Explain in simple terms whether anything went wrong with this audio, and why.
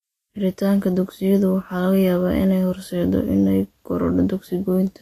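From start to finish, the speech has a grainy, hissy edge and nothing above about 14.2 kHz, most likely Vorbis compression. Unlike simple treble filtering, which only dulls sound, this also turns the remaining fine detail into rough noise and softens sharp consonant starts.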